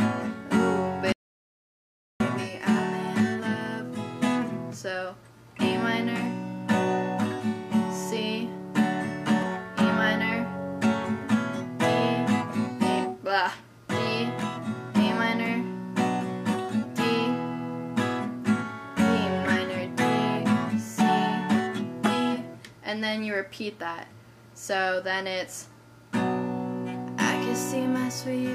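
Audio dropout to silence from 1.12 to 2.20 s: the sound cuts to silence for about 1.08 s, likely a lost input while recording continued.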